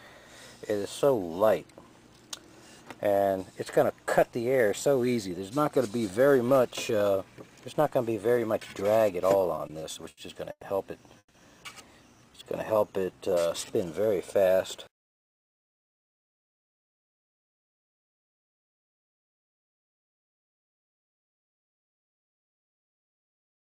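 From 9.55 to 10.64 s the audio shows repeated stalls (stutter). Packets kept arriving late, so the jitter buffer ran dry six times, with the longest wait about 110 ms. Each time the receiver stretched the last sound to bridge the hole, filling 270 ms in all, about a quarter of that stretch, while losing nothing. It sounds halting and dragged. A spectrogram shows short runs of smeared, repeated frames where the harmonic patterns freeze in place. A waveform shows the envelope flattening into copies and then picking up again.

At 11.18 to 11.36 s there is a brief call audio freeze. The sound locks into a held buzz that fades over 160 ms, and the last 60 ms are silent before the audio resumes where it stopped. The likely cause is packets held up in transit, which emptied the jitter buffer and pushed playback about 160 ms later. On a spectrogram the last spectral slice is smeared sideways and dims to a blank column. 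In the waveform a repeating, decaying segment leads into a flat line.

From 12.13 to 13.72 s comes a jitter buffer slow-down. To rebuild its reserve, the receiver repeated single pitch periods and slivers of pauses many times over, adding 208 ms. The audio therefore plays at roughly 87% speed with unchanged pitch. Sounds are drawn out. A spectrogram shows harmonics at their normal spacing but stretched horizontally. A waveform shows near-identical periodic cycles repeated in a row.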